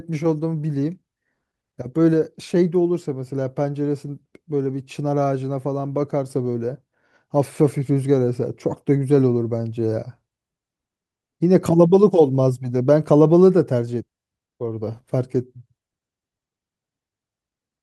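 No audible technical faults present.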